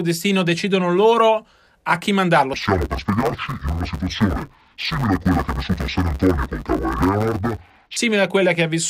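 Interleaved audio read as planar runs from 2.54 s to 7.97 s of this speech clip. Samples that should alternate left and right are split instead, so the first half of each 10 ms block lands in one channel and the second half in the other, each played at half speed. With blocks this short there is no clear octave drop. The speech turns dull and robotic, with a steady buzz at the 100 Hz block rate running underneath.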